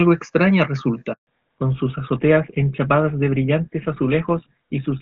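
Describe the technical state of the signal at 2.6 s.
At 2.6 s the call is in a fallback to narrowband. It began at 1.27 s and runs to the end of the clip. Before that point the HD Voice codec carries speech cleanly. Here the link has dropped to an older narrowband codec, and the sound fits GSM full rate. Nothing remains above 4 kHz. The speech sounds duller and rougher, with muffled consonants and less airy sibilance.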